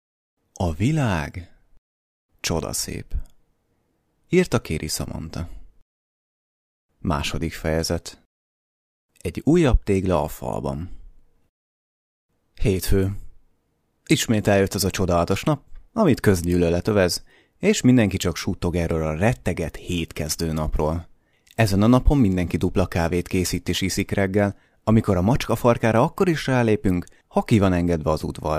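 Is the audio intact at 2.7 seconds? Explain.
Yes, at 2.7 seconds the speech plays through cleanly, with no dropout, click, distortion or other fault at that moment.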